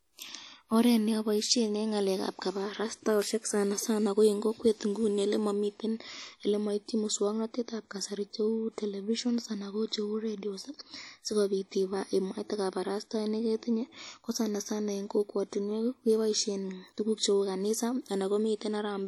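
From start to end the speech carries plainly audible transform-codec damage, likely from WMA compression. Quantisation noise smears across tens of milliseconds around each sound onset, giving a ringing, washy character and a hiss that swells and fades with the signal, consistent with a bitrate around 48 kbps.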